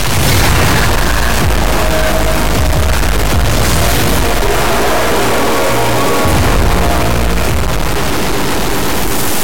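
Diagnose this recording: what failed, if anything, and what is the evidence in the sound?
A likely stuck bit at the converter, a fairly high bit worth about -10 dBFS, causes harsh, buzzy distortion throughout and loud noise filling the pauses.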